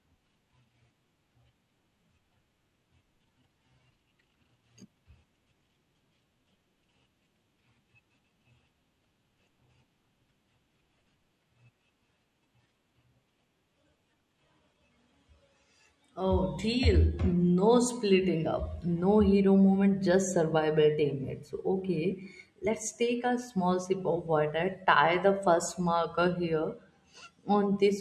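No technical faults turn up anywhere in this speech recording. There is nothing in the signal that needs a timestamp or a closer look.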